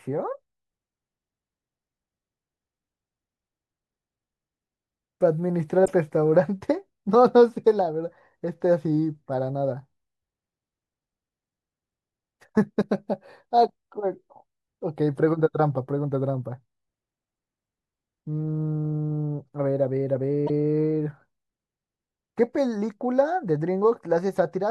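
Speech, with three brief glitches at 5.85–5.88 s, 12.81–12.83 s and 20.46–20.50 s: the audio skips forward. The likely cause is a broken MP3 bit reservoir, with frames decoding from the wrong bytes after a cut, consistent with 24 ms frames.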